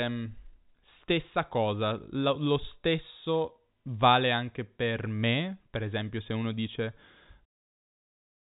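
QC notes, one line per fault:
No faults found. The audio has the narrow, telephone-style band of G.711 coding with nothing above 3.8 kHz, and it ends in a smooth fade-out at about 7.5 s.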